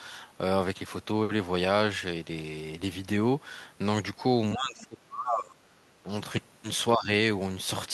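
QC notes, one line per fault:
4.53–5.79 s, speech suppressed in double talk: the speech sinks by roughly 25 dB at its deepest, for about a second. This is likely the echo canceller turning both sides down.
6.03–6.08 s, speech suppressed in double talk: a brief, shallow dip of a few dB, likely the echo canceller briefly ducking during overlapping talk.
6.96–7.08 s, speech suppressed in double talk: the speech drops by roughly 10 dB for about a tenth of a second. The echo canceller likely mistook it for echo.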